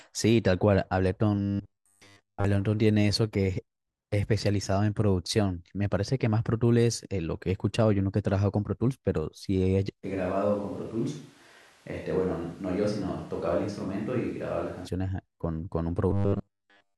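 From 1.36 to 2.45 s, the audio most likely stopped arriving often enough, and the software filled the gaps by looping a very short buffer, skipping most of the real signal. This is robotic sound from repeated short buffers. The loops impose a steady 100 Hz buzz, which fits a 10 ms buffer, so the speech becomes a stiff metallic drone that only loosely tracks its original contour. The same fault returns from 16.11 s and lasts to the end of the clip.

Between 10.06 and 14.86 s, the close microphone's feed has likely dropped out, forcing a switch to a distant microphone. The speech abruptly turns roomy and hollow, loses low end and falls about 5 dB in level. Room noise sits roughly 30 dB below the speech. At 14.86 s the close sound returns just as suddenly.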